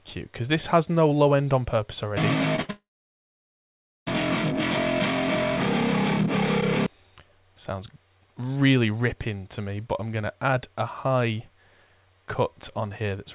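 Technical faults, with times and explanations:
2.56–2.60 s, short concealed packet loss: About 20 ms of audio failed to reach the decoder in time, and the receiver covered the gap with roughly 15 ms synthesized from the preceding sound before blending back into the real signal. The result is a brief smear or wobble. A spectrogram shows a thin vertical slice where the fine detail turns blurred or repetitive, and the waveform shows a short stretch of copied cycles with a slightly uneven join. Like everything on this call path, the spectrogram is empty above 4 kHz.
2.62–2.71 s, burst of packet loss: About 60 ms went missing in a row, and the concealment extended the last sound for about 71 ms while turning it down. A voiced sound becomes a held, buzzy tone and an unvoiced one becomes a fading hiss. On a spectrogram this looks like flat, unchanging horizontal bands or smooth noise that dims. 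The waveform shows a repeated cycle shape shrinking in amplitude. The audio then resumes further on, with the intervening part gone.
2.71–4.08 s, long network dropout: About 1.36 s of audio is lost. After a short fading tail, roughly 1.24 s of near silence follows before the sound returns abruptly, with the missing portion skipped rather than delayed. The likely cause is a stall in the incoming stream, with concealment giving up once the gap ran on too long. On a waveform this appears as a flat, near-zero stretch. A spectrogram shows a dark blank column, and the content on either side does not connect.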